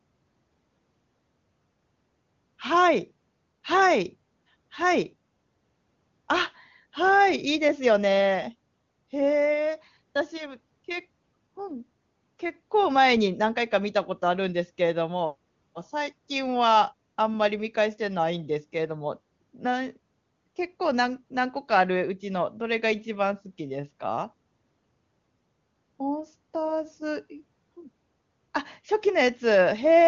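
Nothing stood out on listening to this speech, which comes through the AMR wideband (HD Voice) path at 23.85 kbit/s.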